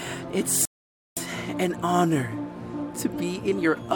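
At 0.65 s the sound cuts to silence for about 0.52 s, returning at 1.17 s: a playback stall, likely from the player's buffer running dry or its thread blocking.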